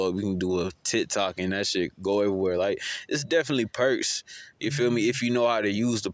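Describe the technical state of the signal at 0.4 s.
At 0.4 s the speech signal is intact, with no dropout, clipping, glitch or other fault, only the ordinary call microphone processing, whose high-pass filter trims the lowest bass and whose band stops at 8 kHz.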